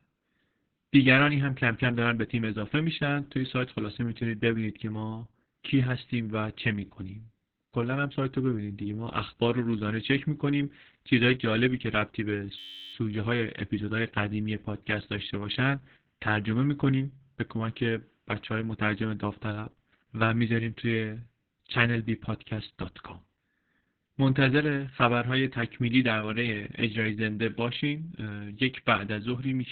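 It's a speech clip with two problems. The whole thing has heavy Opus voice compression. Nothing comes through above about 4.4 kHz, so it's narrowband, and the voice sounds muffled, hoarse and a bit robotic. That's the SILK linear-prediction coder working with very little to spend, which fits a bitrate of around 6 kbps: it narrows the band and codes the excitation only roughly. Then from 12.59 to 12.94 s there's a system hang loop. The machine or driver froze while the sound hardware kept replaying the same 10.67 ms stretch of its ring buffer, 33 times over. Because the loop is so short, you hear a steady buzz at about 94 Hz rather than a stutter, and the length fits a 512-sample buffer. Hardly any audio seems to go missing around it.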